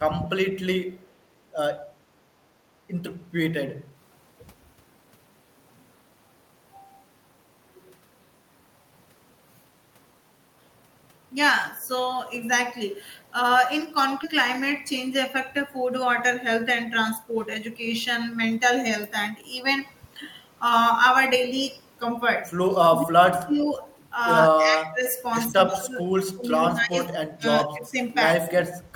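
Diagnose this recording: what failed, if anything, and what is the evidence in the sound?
Skip ahead at 14.23 to 14.25 s, in the network or jitter buffer. About 0.4 s of speech is discarded, and the two sides are spliced with no gap, so playback jumps forward.

Jitter buffer speed-up from 15.0 to 18.9 s, in the receive buffer. Speech runs at 105% with unchanged pitch as short pitch-period slices are trimmed, removing roughly a fifth of a second.

Speech suppressed in double talk at 22.7 to 23.7, 24.5 to 25.1, 25.5 to 26.1, 26.3 to 26.5, 26.7 to 27.2, 27.4 to 27.5, 27.7 to 28.0 and 28.39 to 28.43 s, in call processing. The level dips in pieces by up to about 35 dB, likely because the echo canceller attenuated the near talker while the far side spoke.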